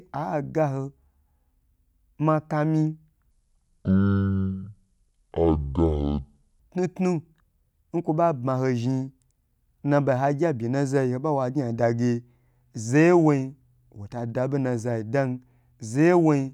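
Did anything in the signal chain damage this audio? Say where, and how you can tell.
Yes. A section at the wrong speed runs from 3.31 to 6.60 s. Speech plays at 0.55x, about ten semitones deeper. This is likely a playback clock mismatch.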